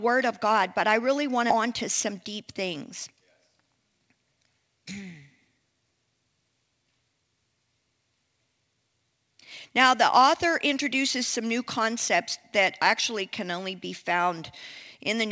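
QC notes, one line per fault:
1.50–1.52 s, skip ahead: roughly 0.4 s of audio was dropped while later audio was already waiting, so playback jumps straight from "but I really want" to "on to" with no gap. A stretch of speech is simply missing, joined almost seamlessly.
2.12–3.12 s, jitter buffer speed-up: with too much audio still buffered, the receiver kept cutting short pitch-period pieces, around 50 ms in total. Just after "on to" the speech runs about 5% fast at unchanged pitch and sounds slightly hurried.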